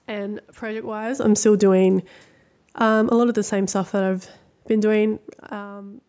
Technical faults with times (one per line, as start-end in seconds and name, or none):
2.83-5.30 automatic gain falling